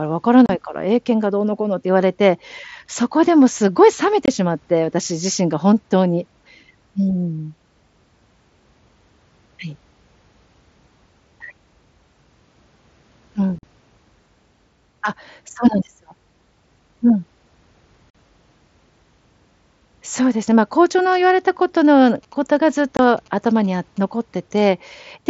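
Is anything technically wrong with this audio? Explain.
Yes. The speech has five abrupt dropouts: 0.46 s (about 30 ms), 4.26 s (about 22 ms), 13.59 s and 18.10 s (about 45 ms each), and 22.97 s (about 22 ms). Each is a sudden hole with hard, abrupt edges. This is unconcealed Bluetooth headset packet loss. Short voice packets between headset and phone never arrived, and nothing smoothed over the gap. The gap lengths fit losses of a few 7.5 ms frames.

From 21.14 s to 23.99 s there is a galloping dit-dit-dit of short buzzes at about 217 Hz, sitting about 30 dB below the speech. These are GSM signalling bursts. A nearby 2G phone was exchanging brief radio bursts with the network, and the audio circuitry rectified that interference into audible pulses. The 22.97 s dropout falls inside this stretch.

The link runs through the mSBC headset codec, which limits the audio to wideband speech up to 8 kHz and adds a light grain on loud sounds.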